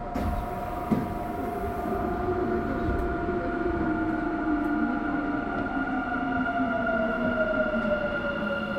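Everyday sound recording, nothing technically wrong heard anywhere in it.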